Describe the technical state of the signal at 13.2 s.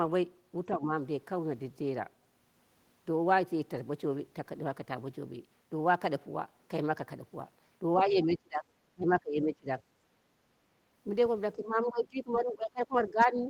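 At 13.2 s the speech is held down, sitting roughly 20 dB below its normal level at its deepest. This speech suppressed in double talk runs from 11.56 s to the end of the clip, likely because the echo canceller could not separate the talker from loudspeaker echo and turned both down.

From 13.2 to 13.24 s, a brief scrap of the other side's voice leaking through sits about 10 dB below the speech. This is likely loudspeaker sound that the echo canceller failed to remove completely from the microphone signal.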